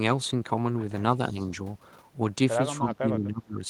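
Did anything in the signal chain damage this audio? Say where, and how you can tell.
Yes, speech suppressed in double talk: a slight dip at 1.32–1.36 s and a deep cut at 2.78–3.65 s, likely from the call echo canceller ducking the talker along with the loudspeaker echo.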